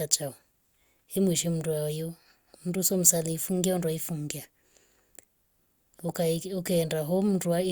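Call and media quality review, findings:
Nothing stood out on listening to the speech in this clip.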